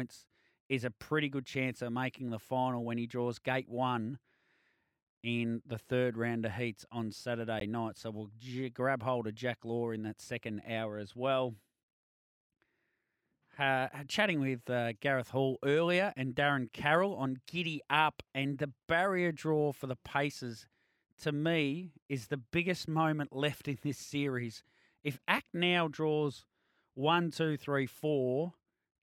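Samples were replaced by zeros, a block of digital silence, at 7.60 s after "round of heats on" (15 ms) and 25.38 s (3 ms); each unfaded cut ticks.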